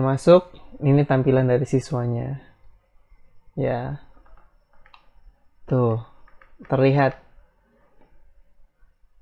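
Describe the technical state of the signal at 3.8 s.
Around 3.8 s the signal is intact, with no dropout, distortion, glitch or other fault at that moment.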